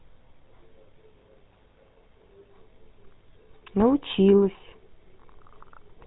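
Speech passed through the GSM full-rate codec throughout: gravelly, buzzy roughness (unlike a clean band-limit), nothing above 3.8 kHz, consistent with 13 kbps coding.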